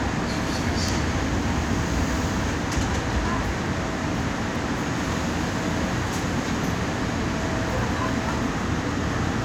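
At 0.88 s a sharp snap, an electrical switching spike peaking near -15 dBFS, sits on top of the sound, likely a nearby switch arcing into the audio line.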